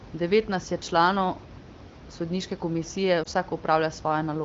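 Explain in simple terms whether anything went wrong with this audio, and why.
Lost AMR speech frames, at about 3.23 to 3.27 s, just after "sodniške komisije": radio errors spoiled a piece of the phone signal, so the wideband decoder briefly repeated the last good sound at lower volume. The result is a short dip or warble, which fits one missing frame.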